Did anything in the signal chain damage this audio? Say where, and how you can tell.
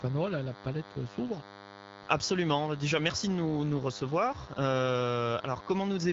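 Yes. A DECT cordless phone buzz sits under the speech for the whole clip. It is a steady, thin buzz at 100 Hz with many harmonics, roughly 20 dB below the speech. The damage enters at the analogue wiring stage. A nearby DECT handset or base sends a radio burst every 10 ms. The audio circuit rectifies each burst. That turns the 100 Hz burst rate into an audible tone, rich in harmonics because the pulses are sharp-edged.

The second fault is an AMR rate drop, a network-driven codec event. From 3.40 s to 4.62 s the speech turns rougher and more synthetic. The band stays the same, and there is no gap. The texture fits the AMR-WB encoder stepping down from 12.65 to 8.85 kbit/s. A weak radio link makes the network request a lower codec rate, so fewer bits go to the speech and more to error protection. At 4.62 s the rate recovers and the roughness clears.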